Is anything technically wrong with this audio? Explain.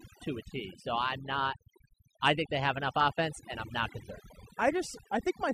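Yes. Throughout, overdone noise removal gates quiet bands whenever they approach the noise estimate. The background drops and breaks up into twinkling specks, and a spectrogram shows a speckled, holed texture.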